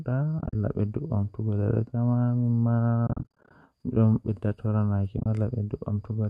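AAC frames went missing and the decoder muted each gap, with overlapping windows fading the sound out and back in, so the holes are soft-edged. This AAC frame loss with muting chops the speech from 0.39 to 0.55 s (about 100 ms lost), again from 3.07 to 3.51 s (290 ms lost), and at 5.18 to 5.26 s (60 ms lost). Each stretch is broken into short dropouts of a few tens of milliseconds, fitting 10 ms frames, over slight graininess that is likely from low-delay AAC.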